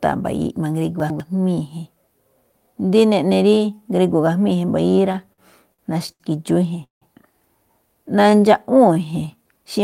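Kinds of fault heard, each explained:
Chunks out of order: around 1.0 to 1.2 s two 100 ms chunks play swapped, one arriving a chunk late, so you get a jumbled blip.
Repeated stalls (stutter): from 4.91 to 6.22 s the buffer keeps running dry, eight little gaps filled with stretched sound, longest about 82 ms, so it drags and stutters.
Call audio freeze: at 6.84 to 7.04 s the sound hangs for about 177 ms, a fading tail then roughly 130 ms of silence, likely packets held up in transit.
Jitter buffer slow-down: from 8.08 to 9.54 s the receiver repeats tiny slices to rebuild its reserve, so it runs about 90% speed, same pitch, slightly drawn out.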